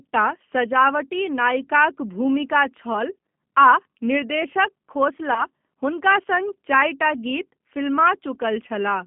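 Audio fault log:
throughout G.729 codec: speech is rebuilt from a vocal tract filter, pitch predictor and sparse pulses, fitting 8 kbit/s G.729A, leaving a 150 Hz to 3.4 kHz band that sounds plainly rough and synthetic.
5.34 to 5.44 s VoIP packet loss concealed by the speech codec: about 20 ms of packets went missing, so the decoder extended its last pitch and filter into a fading buzzy tone or coloured noise, staying weak until recovery.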